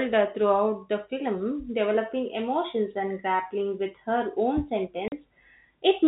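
At 5.08 s the speech drops out for 40 ms, a case of packet loss filled with silence. The gap has hard edges. It fits two lost 20 ms packets.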